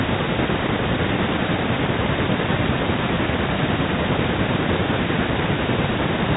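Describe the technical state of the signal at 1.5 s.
At 1.5 s the speech is intact, with no fault, just the narrow telephone band of G.711 coding above the bass trimmed by the call microphone processing.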